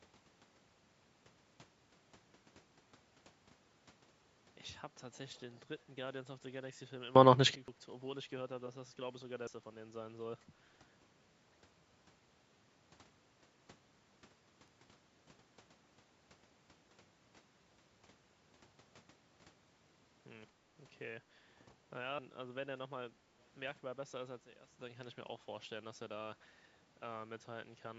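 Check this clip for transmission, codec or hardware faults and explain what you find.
Three kinds of fault turn up in this speech: dropped buffers, echo leaks and sudden gain jumps, all heard against call-style microphone processing that takes out the lowest bass, which is expected.

Dropped buffer (overrun) at 3.50, 7.68, 9.47, 14.68 and 22.19 s. Each is an abrupt skip. The likely cause is audio being overwritten before it was read, losing about 100 to 300 ms each time. A waveform shows a discontinuity, and a spectrogram shows a vertical broadband line with no gap.

Echo leak at 5.12–5.18, 5.52–5.60, 5.79–5.85 and 23.41–23.48 s. Short scraps of the speech return 217 ms late, about 25 to 35 dB below it. The likely cause is a loudspeaker's pickup slipping past echo cancellation. On a spectrogram, faint copies of the harmonic patterns trail the originals.

Sudden gain jump at 7.15–7.55 s (up about 24 dB) and 24.42–24.79 s (down about 12 dB). 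Speech and background noise change level together, stepping at once with no ramp. The likely cause is a digital gain change applied between two samples. A waveform shows a rectangular step in the envelope.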